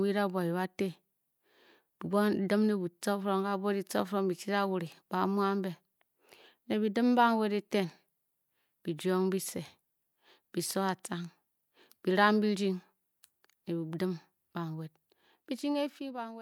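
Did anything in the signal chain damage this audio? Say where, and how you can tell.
Yes. Zipper noise runs from 15.17 s to 16.41 s, right after "dim banwed". The level drops by about 15 dB in 1 dB steps, roughly fifteen per second, each making a small tick. That points to gain applied per buffer in the driver or playback stage without smoothing.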